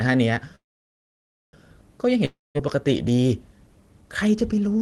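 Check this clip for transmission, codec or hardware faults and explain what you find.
Two transmission faults are present, both heard over call-codec audio whose top end stops around 12 kHz, consistent with Opus at a low bitrate.

From 0.55 to 1.56 s there is a call audio freeze. The speech stalls, a brief fading tail gives way to about 0.93 s of silence, and then the speech resumes exactly where it stopped. This is likely jitter-buffer underrun from delayed packets. Nothing is lost, but everything after it runs about 1 s late.

From 2.25 to 2.58 s there is a long network dropout. The last sound smears into a short decaying buzz, then roughly 0.19 s of silence, and the speech comes back further on with about 0.3 s of it missing. The likely cause is packets that never arrived.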